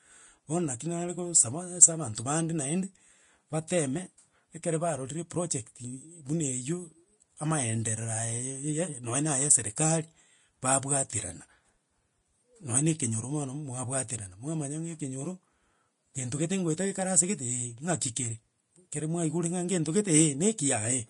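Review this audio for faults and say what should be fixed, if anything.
Throughout the speech, nothing reaches above 10.6 kHz, and the treble turns grainy and hissy. This is likely Vorbis compression at a rate fitting about 33 kbps. Unlike steady background hiss, this noise rises and falls with the signal. Encode at a higher Vorbis quality setting to prevent it.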